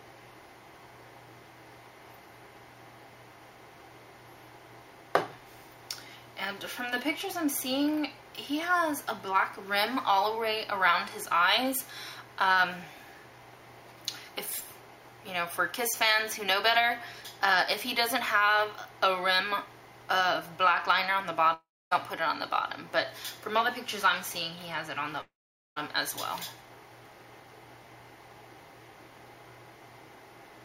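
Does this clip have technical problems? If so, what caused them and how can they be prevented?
Yes. There are two gaps, at 21.53 to 21.93 s and at 25.21 to 25.78 s. In each, the last sound is stretched into a fading buzz or hiss. It then drops to silence, for about 0.26 s in the first gap and 0.47 s in the second. The audio resumes with about 380 ms and 560 ms missing. The likely cause is a long network dropout: packets stopped arriving, and the receiver concealed the hole. A larger jitter buffer, forward error correction and a steadier network link would help prevent this.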